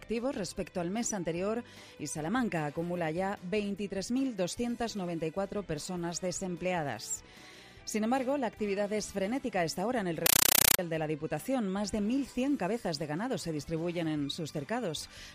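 From 10.26 to 10.79 s, a compressed stream played as audio: an AC-3 bitstream was passed on as raw samples instead of decoded. Loud static chatters about 31 times a second in 8 ms bursts with silent gaps between them. That steady gated rhythm sets it apart from random noise bursts.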